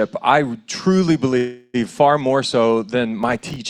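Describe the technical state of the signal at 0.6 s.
At 0.6 s the signal is intact, with no audible technical fault at that moment.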